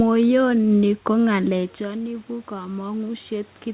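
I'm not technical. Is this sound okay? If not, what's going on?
No. From 1.31 seconds to the end, the call's automatic gain kept rising: the system heard the input drop, as the talker moved back around a second and a half, and slowly turned itself up. The voice and the room's background noise swell louder together.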